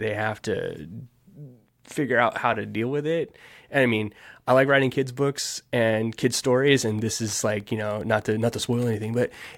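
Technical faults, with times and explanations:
6.59 to 9.58 s, Wi-Fi interference: right after "kids books and kids", a steady ticking about 35 dB below the speech runs to the end, ten per second. A nearby radio's beacon, repeating every 102.4 ms, is rectified by the audio circuit.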